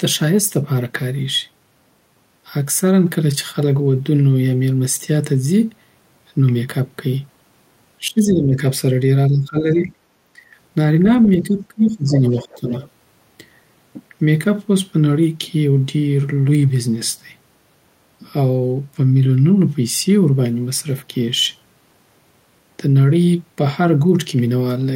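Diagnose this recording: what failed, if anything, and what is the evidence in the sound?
Call processing failed, shown as speech suppressed in double talk. The speech dips by about 15 dB at 7.99–8.62, 9.29–9.90 and 10.34–10.39 s, and by about 20 dB at 11.38–12.72 s. The likely cause is the echo canceller attenuating the near talker during overlap.

The other side's voice is leaking through from 12.12 to 12.88 s, also a call-processing fault. A second voice sits about 15 dB below the speech. The echo canceller likely left residual loudspeaker echo in the microphone signal.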